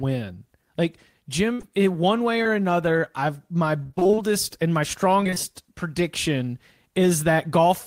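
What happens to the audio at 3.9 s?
Repeated packet loss (robotic sound) runs from 3.83 to 4.19 s. Audio keeps going missing in short holes, roughly nine of them, the longest about 29 ms, each filled by stretching the preceding sound. Half that span is patched, so the speech turns choppy with pieces missing.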